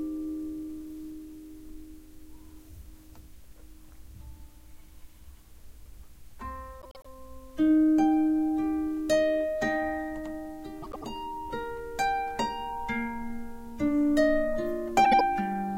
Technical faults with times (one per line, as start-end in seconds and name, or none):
6.81-7.06 frames out of order
10.82-11.06 frames out of order
15.04-15.21 frames out of order